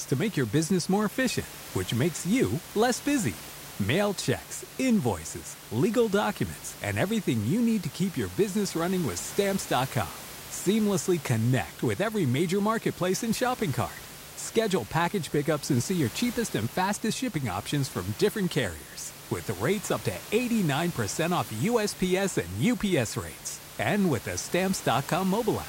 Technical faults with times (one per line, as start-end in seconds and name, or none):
none